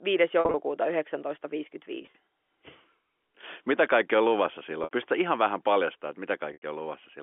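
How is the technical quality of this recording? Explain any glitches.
The recording has four short glitches, all of one kind, in narrowband G.711 telephone speech. At 0.40–0.54 s, 2.02–2.14 s, 4.84–4.91 s and 6.53–6.62 s, the speech momentarily freezes into a held, buzzy tone, and in the last two it fades briefly into silence before returning. This is packet loss with pitch repetition: missing stretches of 60–110 ms, scattered in the first two, were bridged by repeating the last pitch period.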